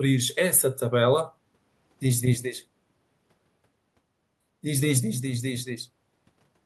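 Nothing here gives a listener anything to flag, as the speech runs its whole course without a single technical fault turning up.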